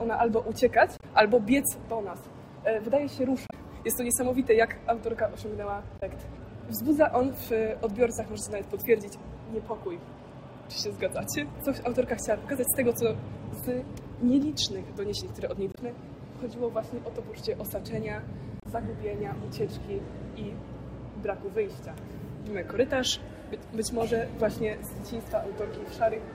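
Short bursts of damaged data in a compressed stream occur at 0.97–1.04, 3.47–3.53, 5.97–6.03, 15.71–15.78 and 18.60–18.66 s, each lasting 62 to 72 ms. Corrupted bytes make the decoder misread the affected frames and lose sync until it finds a valid frame header. Each is heard as a brief chirp, squawk, click or short hole. On a spectrogram, each shows as a narrow vertical smear of unrelated energy. The waveform shows a brief discontinuity where the signal breaks off and resumes.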